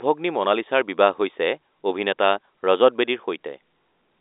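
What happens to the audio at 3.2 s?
Nothing goes wrong at 3.2 s: the speech carries on intact, with the narrow telephone band of G.711 coding, roughly 300 Hz to 3.7 kHz, passing as it should.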